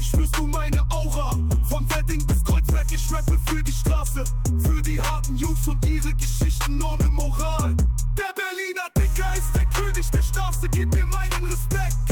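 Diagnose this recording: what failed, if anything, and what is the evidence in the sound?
Nothing in this recording points to a failure. No event in the sound places a problem at any stage, from the analogue wiring and converter through buffering, processing, transmission, storage and playback.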